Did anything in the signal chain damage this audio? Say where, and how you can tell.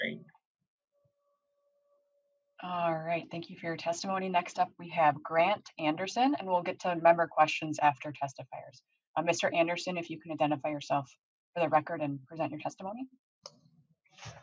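No. Call microphone processing is working normally, nothing damaged.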